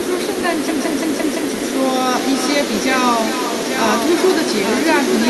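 From the start, echo with no canceller shadows the speech. A quieter, thinner copy returns roughly 0.4 s later, about 11 dB down, from the far loudspeaker.

From 0.68 to 1.54 s, a system hang loop repeats one 0.17 s slice five times. That gives a stutter near 5.9 Hz, which fits an 8192-sample buffer. Roughly a second of sound is lost.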